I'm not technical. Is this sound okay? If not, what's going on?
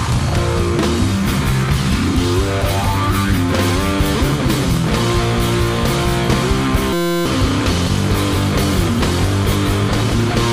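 No. From 6.93 to 7.26 s there is a system hang loop: the computer briefly froze, and the sound hardware kept replaying one tiny 5.8 ms slice over and over. At 172 repeats per second, it sounds like a steady buzz, and about a third of a second of real audio is lost.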